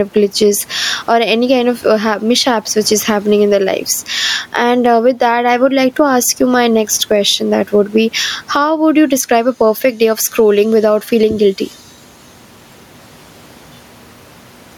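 Gain pumping runs through the whole speech recording. The gain swings by around 10 dB, so loud and quiet passages sit unnaturally close in level and the speech sounds squashed. The likely cause is input gain set far too high, with a fast limiter or compressor clamping down on each peak. The room noise sits about 40 dB below the speech.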